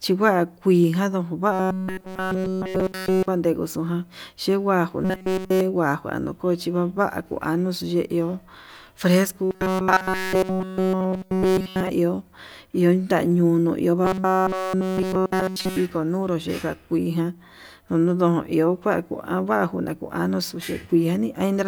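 Speech with robotic sound from repeated short buffers at 1.52–3.28, 5.05–5.61, 9.44–11.89 and 14.05–15.77 s (the last just after "ñunuu iho"). Each stretch becomes a rigid metallic buzz at 188 Hz, which would show as evenly spaced horizontal harmonic lines on a spectrogram and an identical short cycle repeating across the waveform. The likely cause is a single buffer of about 5.3 ms being replayed in place of the missing audio.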